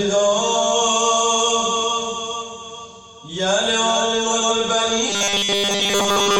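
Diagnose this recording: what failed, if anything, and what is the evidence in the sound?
From 4.30 to 4.51 s and again from 6.06 to 6.29 s, the sound briefly garbles into a flutter. These are frames out of order at the network or decoder stage: two neighbouring blocks of about 93 ms each were decoded with their order swapped, which fits two-frame runs.

From 5.10 s to the end at 6.40 s, the sound becomes a rigid, metallic 200 Hz buzz throughout. This is robotic sound from repeated short buffers, likely at the driver or buffer stage: a 5 ms slice replayed in place of fresh audio imposes that fixed pitch.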